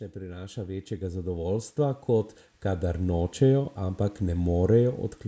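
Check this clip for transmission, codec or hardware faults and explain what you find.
One fault is present, an automatic gain rising, and it runs from 0.13 s to 4.27 s. The gain control judged the speech input too quiet and kept pushing its gain up over those four seconds, lifting the level by about 13 dB. Speech and background noise swell together, so the room sound climbs along with the voice. The band stopping at 8 kHz comes from the call's microphone processing.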